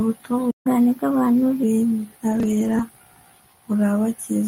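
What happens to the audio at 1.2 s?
At 1.2 s the player is in a catch-up at higher speed, running from 0.67 to 1.63 s. After a stall it has built up a backlog, and it clears it by resampling playback at 1.15 times normal speed. Because resampling ties speed and pitch together, the speech is both hurried and raised by about two semitones, giving a slightly chipmunk-like lift. At 1.63 s the tempo and pitch drop back to normal.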